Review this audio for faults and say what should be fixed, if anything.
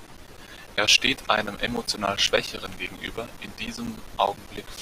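Periodic USB or driver dropouts run from 0.07 to 4.77 s. Every 0.1 s the driver stalls and roughly 10 ms of speech becomes silence, about fifty ticks. Their strict spacing sets them apart from random packet loss. Prevent this by stopping the background task that blocks the USB bus.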